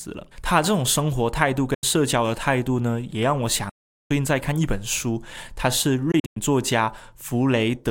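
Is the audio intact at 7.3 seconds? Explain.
Yes, the speech at 7.3 seconds plays through cleanly, with no dropout, click, distortion or other fault audible at that moment.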